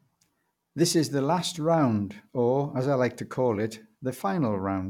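No technical faults occur at any point in the speech, so there are none to describe in time order.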